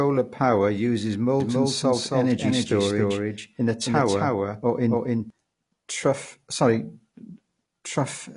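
From start to finish, the audio has no content above 10.5 kHz. It sounds dull and smeared, and the codec damage is plainly audible. This is likely AAC compression, AAC-LC at a low bitrate, which fits roughly 32 kbps. The encoder lowered its cut-off to save bits.

From 1.40 s to 5.30 s, a doubled audio track appears. A full-band copy trails the speech by about a third of a second, at about the same level. It has no decay or room colour. It starts and stops abruptly. A second capture path or a misaligned edit would produce this.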